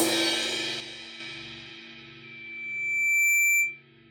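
From 0.80 to 1.20 s the sound drops abruptly by about 6 dB and then returns just as sharply. The likely cause is one channel dropping out before the mono sum. A fader dip would slide, but this is an instant halving of shared content that removes anything carried only on the lost side.

From 2.23 to 3.82 s a loudspeaker feedback squeal appears as a single 2.3 kHz tone. A microphone re-amplified its own loudspeaker output until that frequency ran away. Unlike a steady whistle or interference tone, it swells over about a second to sit roughly 10 dB above the sound before it stops.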